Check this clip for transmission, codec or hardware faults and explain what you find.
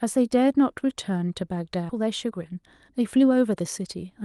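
Two faults stand out in this speech clip, both in a call path whose top end stops near 12 kHz.

Skip ahead at 1.89 to 1.91 s: roughly seven tenths of a second of audio was discarded while later packets were already queued, so playback leaps forward with no gap filled. The speech on either side is butted together, and a chunk simply vanishes.

Jitter buffer speed-up from 1.99 to 4.18 s: the buffer was still holding more audio than its target, so the receiver repeatedly trimmed short pitch-period slices, about three tenths of a second in total. The speech runs at 111% speed at unchanged pitch and sounds hurried.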